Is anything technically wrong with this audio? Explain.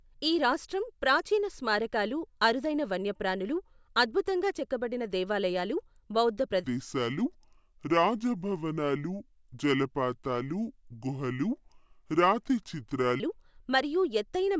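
Yes. From 6.64 s to 13.2 s, right after "అద్భుతంగా చెక్కబడిన దేవాలయాలు బౌద్ధ", the speech suddenly drops to about two-thirds speed and sinks roughly 7 semitones, sounding low and dragged until "మరియు ఎత్తైన మైదానాలతో నిండి" returns at normal pitch. This is a wrong sample rate fault. The samples are played back slower than they were captured, without resampling, so tempo and pitch fall together by the same ratio of 0.667, consistent with 24 kHz audio played at 16 kHz.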